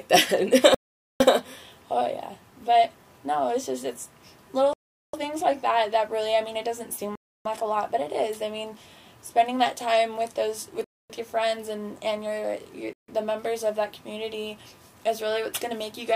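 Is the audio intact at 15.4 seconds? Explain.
Yes, the audio is intact at 15.4 seconds, with no dropout, click, distortion or other fault at that point.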